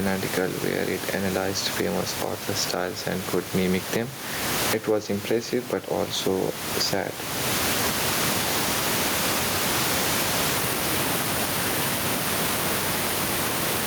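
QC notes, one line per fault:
Throughout: gain pumping. The gain swings by roughly 20 dB. Loud and soft passages sit close in level, so the speech sounds squashed. Likely cause: input gain far too high, with a fast limiter clamping peaks.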